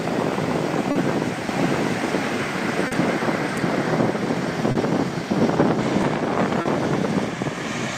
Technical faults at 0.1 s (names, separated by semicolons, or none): clock drift between sender and receiver